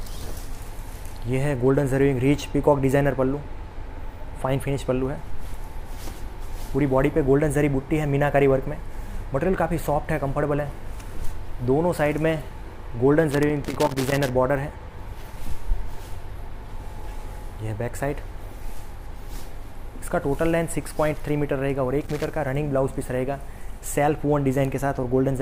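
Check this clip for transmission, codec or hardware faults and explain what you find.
Two bursts of loose connector crackle are the faults here. The first runs from 13.31 to 14.30 s, about one second long. The second is shorter, from 22.01 to 22.30 s. A worn or dirty contact is making and breaking as it shifts. Each break chops the signal, and any DC on the line turns the reconnections into pops. The result is an irregular, scratchy crackle laid over the sound.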